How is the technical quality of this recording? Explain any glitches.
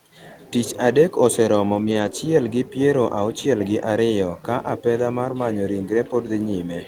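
Two stretches of the speech were rebuilt after lost packets. At 1.73 to 2.07 s, and again at 5.25 to 5.31 s, packets failed to arrive, and the decoder filled each hole from the low-bitrate copy carried in the following packet. This is a lost packet rebuilt from error correction. About 180 ms of sound was reconstructed in the first case, which fits nine lost packets, and 40 ms in the second. Nothing drops out, but those moments sound rougher and noisier.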